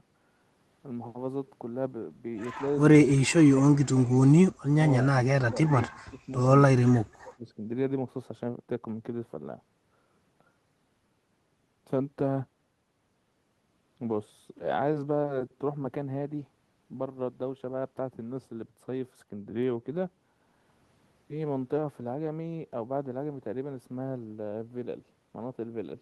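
At 4.48 to 4.8 s, 5.48 to 6.33 s and 6.88 to 7.64 s, the speech sinks sharply. The deepest dips reach roughly 35 dB, with the middle one nearer 25 dB. This is speech suppressed in double talk. The likely cause is an echo canceller that heard both sides at once. It could not tell the talker from the loudspeaker echo. So it turned the talker down too.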